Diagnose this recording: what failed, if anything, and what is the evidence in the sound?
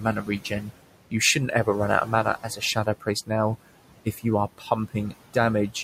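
The fault sits in call processing. Noise suppressor artifacts run through the whole recording. The room noise, about 14 dB below the speech, is pulled down by about 18 dB in the gaps and rises back under the speech.

The same stage also produced speech cut by the noise suppressor. Speech dips at 0.0–0.71 s, just after "run out of" at 2.05–2.26 s, and at 2.43–3.08, 4.05–4.25 and 4.58–4.71 s. The drops are about 9 to 17 dB, deepest at 4.6 s. Quiet speech was misread as noise and swallowed.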